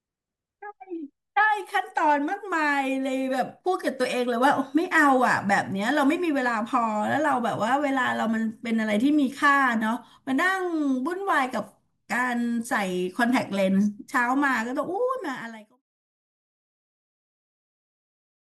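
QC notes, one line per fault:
Nothing to flag here, just the speech with a gentle editor's fade-out that begins around 15 s and is done by 15.8 s.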